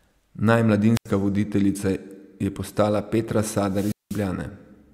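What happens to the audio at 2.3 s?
Nothing goes wrong at 2.3 s; the speech runs through that moment intact, with no dropout, glitch or other fault.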